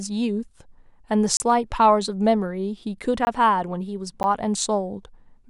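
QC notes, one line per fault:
1.37–1.40 s, block of digital silence: the output buffer points to having gone unfilled for 30 ms and been sent as zeros, so the speech drops straight to dead silence and back with no fade, leaving a short audible hole.
3.25–3.27 s, block of digital silence: a 20 ms run of zeros cuts in abruptly, heard as a pop-like break.
4.23 s, block of digital silence: a 10 ms dropout, short enough to register mainly as a single tick.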